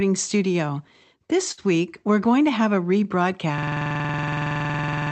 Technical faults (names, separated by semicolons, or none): short stall from a late packet; system hang loop